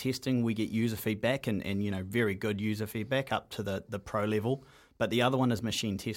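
Nothing to report: no technical faults are audible at any point in the speech.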